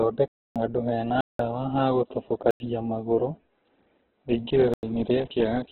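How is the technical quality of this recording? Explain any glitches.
The technical quality is poor. Heavy compression runs through the whole clip, and the sound drops out completely four times.

Throughout the clip, the speech is narrowband, with nothing above about 4.2 kHz. It sounds muffled, grainy and rough, and the tonal parts of the voice turn noisy. This is likely Opus compression in its music (CELT) mode at a very low bitrate, around 8 kbps. The encoder keeps the overall energy in each band but has too few bits for detail, so it fills bands with noise or folded copies. That is why the sound is coarse rather than swirly.

There are four blocks of digital silence: 0.28 to 0.56 s (279 ms), 1.21 to 1.39 s (186 ms), 2.51 to 2.60 s (93 ms) and 4.74 to 4.83 s (93 ms). In each one, the audio drops abruptly to silence and returns with no fade, so each gap is heard as a hole. The lengths point to output buffers of 8192 and 4096 samples that were not filled in time.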